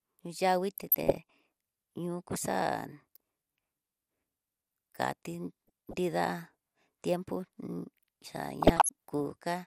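A speech recording, dull and coarse from start to finish. The top end is missing, and what remains has a gurgling, granular edge. Upper bands seem to drop in and out. This is MP2 compression, likely at a low rate, with a sound that fits something around 80 kbps. Layer II gives each of its 32 sub-bands a share of bits. When bits run short, the highest bands are switched off and the rest are coarsely quantised. DAB burbling appears three times: from 0.68 to 1.30 s, from 5.67 to 5.97 s, and from 8.62 to 8.89 s. The cause is weak reception. A small fraction of bits, around half a percent to 0.7 percent, arrive wrong and slip past error correction into the audio data. Corrupted samples put short blips of noise into single sub-bands, and corrupted scale factors make sub-bands jump in level for up to a frame.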